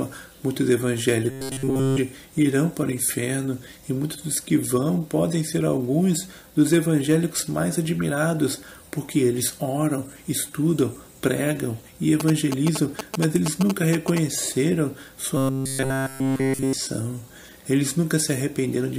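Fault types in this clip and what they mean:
Robotic sound from repeated short buffers: from 1.31 to 1.98 s and again from 15.37 to 16.73 s the sound turns into a rigid metallic buzz locked at 134 Hz, likely from a stretch of about 7.5 ms being replayed in place of the incoming audio.
GSM signalling bursts: between 12.20 and 14.19 s a galloping dit-dit-dit of short 217 Hz buzzes is heard, about 5 dB below the wanted sound. These are the rectified radio bursts of a nearby 2G phone signalling its network.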